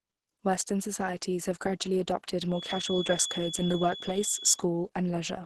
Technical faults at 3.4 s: Opus compression; feedback whistle

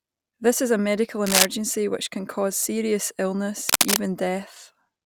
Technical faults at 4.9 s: none

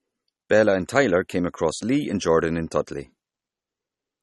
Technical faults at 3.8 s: low-bitrate audio saved at a high bitrate

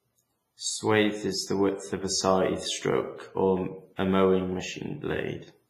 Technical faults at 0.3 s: WMA compression

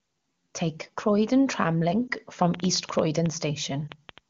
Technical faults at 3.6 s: train of clicks

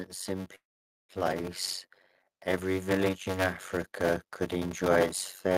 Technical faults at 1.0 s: block size mismatch (padded); call audio freeze

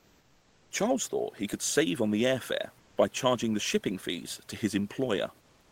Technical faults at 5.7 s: comfort noise in place of the background

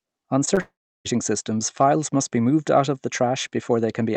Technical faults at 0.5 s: short concealed packet loss

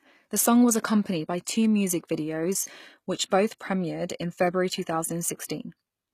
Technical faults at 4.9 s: HE-AAC compression

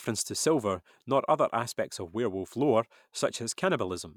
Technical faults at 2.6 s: none

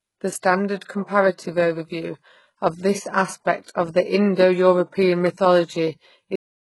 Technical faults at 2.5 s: low-bitrate audio saved at a high bitrate

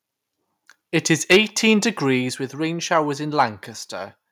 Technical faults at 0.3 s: none

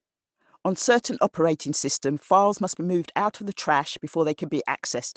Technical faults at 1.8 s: none

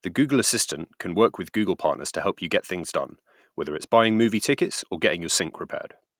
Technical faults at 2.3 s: none

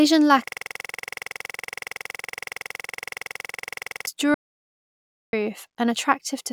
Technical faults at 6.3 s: none

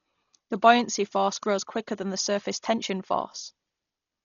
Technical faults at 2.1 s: Dolby Digital compression

